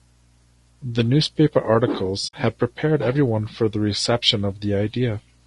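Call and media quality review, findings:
Low-delay AAC compression throughout the speech: rough, grainy voice, noise filling the gaps between pitch harmonics. Likely AAC-ELD at a low bitrate near 32 kbps.

AAC frame loss with muting, 2.27 to 2.34 s: speech fades to silence and back, soft edges. Decoder zeroed the missing spectrum; overlapping windows taper it. Fits about three lost frames. Unlike a hard dropout, it has no step, and nothing is repeated.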